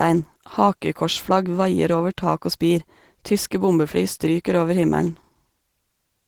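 Opus voice compression runs throughout: SILK codes the speech below 8 kHz and a thin CELT layer codes above it, which fits around 16 kbps. It sounds hoarse and slightly robotic; a spectrogram shows blotchy upper bands.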